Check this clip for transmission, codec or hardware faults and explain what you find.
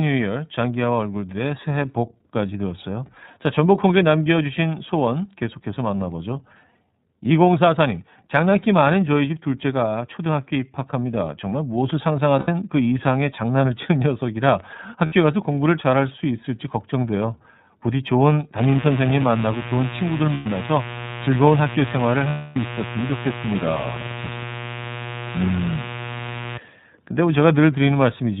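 Three faults are present: narrowband codec coding throughout, four dropouts concealed by the decoder, and a mains buzz in the later part of the speech.

The whole clip passed through the iLBC codec, which codes each frame independently and discards everything above 4 kHz. The speech is band-limited and plainly rough and synthetic, consistent with its 30 ms frame, 13.33 kbps mode.

Lost iLBC frames occur at 12.39–12.49 s (90 ms), 15.06–15.13 s (60 ms), 20.34–20.47 s (120 ms) and 22.29–22.57 s (270 ms). Packets went missing, and the decoder filled each gap by repeating the last pitch cycle with added noise. Each gap sounds like a held, buzzy vowel, and the longest one fades.

Mains buzz runs from 18.58 to 26.58 s. Switching spikes from poor shielding or a rectifier entered the signal twice per 60 Hz cycle, spreading harmonics up to several kHz. The result is a steady, raspy buzz only about 10 dB below the speech.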